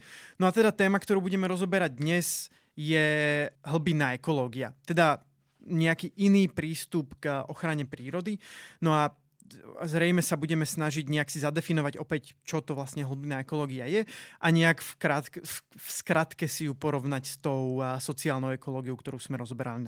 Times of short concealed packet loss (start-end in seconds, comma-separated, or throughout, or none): none